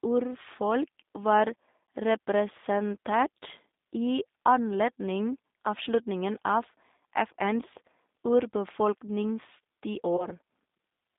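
Throughout, the G.729 codec's pitch-and-pulse rebuilding makes the speech rough and synthetic within a 200 Hz to 3.7 kHz band, unlike plain band-limiting, which stays smooth. From 10.17 to 10.29 s, VoIP packet loss concealed by the speech codec stretches the last sound into a fading buzzy tone or coloured noise, fitting about 20 ms lost, with weakness persisting after recovery rather than a clean gap.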